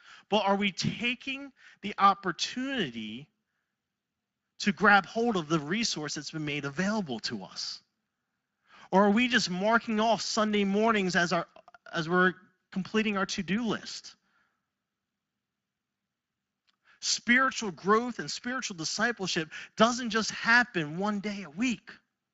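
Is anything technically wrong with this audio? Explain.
Yes. Speex codec damage runs through the whole speech clip. The coder has too few bits for its excitation, so speech sounds noticeably hoarse and noisy, which fits roughly 20 kbps.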